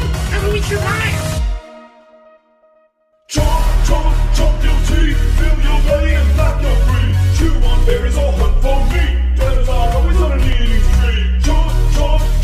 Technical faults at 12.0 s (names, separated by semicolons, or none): none